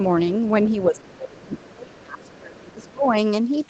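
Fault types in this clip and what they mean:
Other side's voice leaking through: The echo canceller likely failed to fully remove the far end's loudspeaker sound from the microphone, so traces of a second voice ride underneath the speech. Here it surfaces in short scraps at 0.65 to 1.01 s, 1.52 to 1.73 s, 2.25 to 2.40 s and 2.57 to 2.91 s. It sits faint, roughly 25 to 30 dB below the main speech.
Speech suppressed in double talk: With both sides talking at once, the echo canceller likely could not tell the near talker from the loudspeaker echo and pulled the whole signal down. The main voice sinks noticeably from 0.86 to 1.53 s and again from 1.70 to 3.14 s, overlapping the leaked scraps. It dips by as much as roughly 25 dB in the first stretch and about 20 dB in the second.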